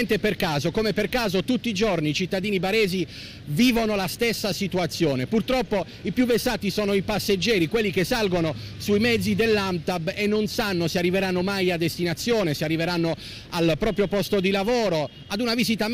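No dropouts, glitches, distortion or other transport or processing faults can be heard anywhere in the audio.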